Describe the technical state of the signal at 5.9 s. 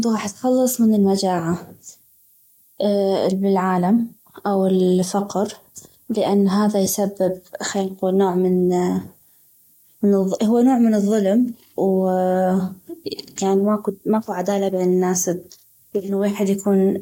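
At 5.9 s you're hearing low bit depth with noise shaping, and it runs through the whole clip. The speech sits on about 9 bits, with the rounding error pushed up in frequency, so there's a steady, thin hiss, roughly 30 dB down, climbing sharply toward the top end.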